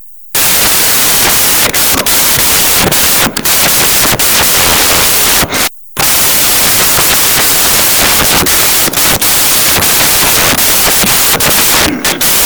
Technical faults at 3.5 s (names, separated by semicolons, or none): samples built from the wrong bytes